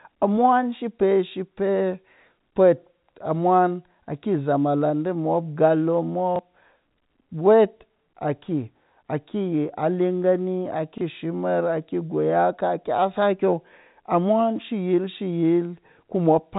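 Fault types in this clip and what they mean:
Packet loss with last packet repeated: twice in this speech, at 6.36 to 6.39 s and again at 10.98 to 11.01 s, a 30 ms chunk goes missing, which fits a single lost packet each time. The receiver fills the gap by replaying the chunk it just played, and each repeat comes through as a small blip, heard over the narrow, telephone-band G.711 sound.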